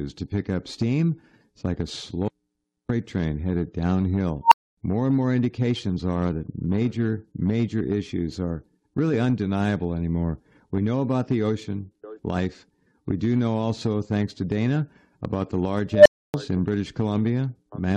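An unstable filter ran away twice: at 4.44 s a tone near 1 kHz swells over 74 ms into a squeal, then 259 ms of silence; at 15.93 s, near 700 Hz, it builds over 125 ms, then 284 ms of silence.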